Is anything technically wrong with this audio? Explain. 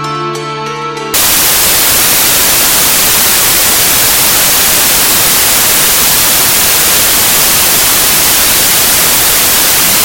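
Yes. From 1.14 s to the end, samples built from the wrong bytes turn the sound into loud, harsh broadband noise. Misassembled bytes let fast-changing low bits dominate each value.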